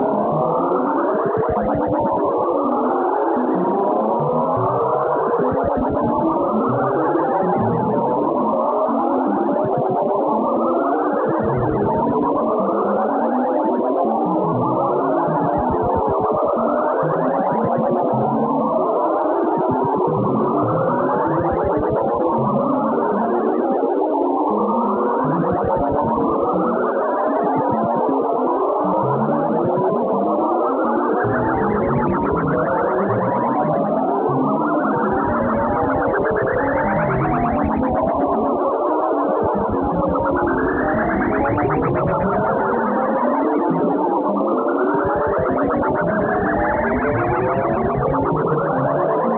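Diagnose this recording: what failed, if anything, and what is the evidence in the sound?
Nothing failed: the audio shows no dropouts, clicks, distortion or timing breaks, and its content stops at 4 kHz, which fits a telephone-band call path using G.711 mu-law.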